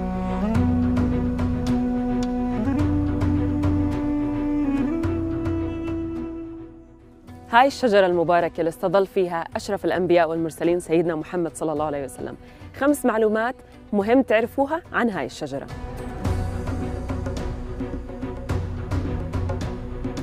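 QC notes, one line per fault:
No fault found in this clip.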